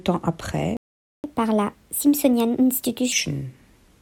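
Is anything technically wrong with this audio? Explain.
Yes, there are two faults.

A playback stall runs from 0.77 to 1.24 s. The speech goes silent for about 0.47 s, likely because the player ran short of data.

Catch-up at higher speed follows, from 1.24 to 3.12 s. The player resamples its backlog at 1.25 times normal speed. The speech sounds hurried and roughly four semitones higher.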